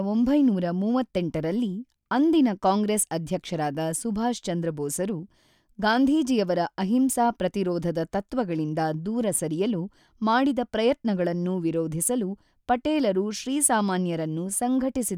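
Listening through the speech recording, nothing stood out as a technical problem at any point.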